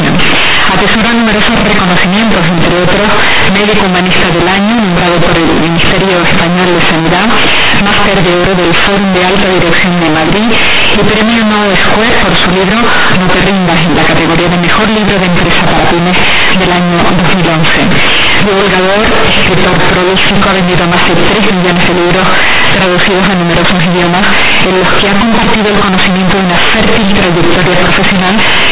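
From start to finish the speech is wrecked by companded audio read as linear. The bytes were coded as mu-law but are played as plain 8-bit samples, with no expansion step. Each sign change throws the output across about half its range. Quiet passages come out as loud as peaks. The waveform is badly bent. The result is harsh, very loud, buzzy distortion, with strong noise filling the pauses. The band still stops at 4 kHz, as telephone coding does.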